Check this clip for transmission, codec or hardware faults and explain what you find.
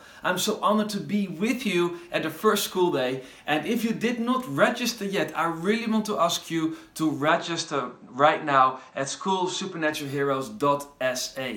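One fault is present. From 7.28 to 9.93 s the top end cuts off above 8.4 kHz with no gap at the switch, likely an input switched to a poorer device. The audio turns duller at an unchanged level, over a faint new noise floor.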